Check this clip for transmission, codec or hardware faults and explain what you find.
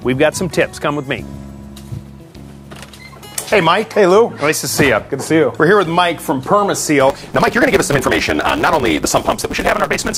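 One fault appears, a block size mismatch (truncated), from 7.09 s to the end of the clip at about 10.2 s. One stage writes blocks, consistent with 512 samples, while the next reads shorter ones and discards each tail. The result is a 150 Hz buzz at the block rate and audio running 1.6 times faster at about its normal pitch. Unlike simple speed-up or resampling, the timbre stays. Unlike a padded mismatch, the audio hurries rather than stretching out with gaps.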